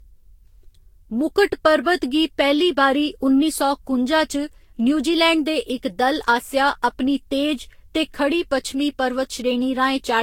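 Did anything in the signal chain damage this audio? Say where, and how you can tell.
Yes, at the codec stage, where the speech shows generation loss throughout: it sounds swirly, hollow and smeared, attacks are blurred, and nothing is heard above 16.7 kHz. That fits around seven lossy passes, likely Vorbis near 64 kbit/s, each requantising on a shifted frame grid.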